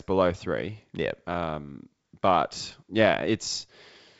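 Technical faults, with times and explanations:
Nothing stood out on listening to this speech, which carries the usual wideband telephone band of G.722 coding up to about 7.7 kHz.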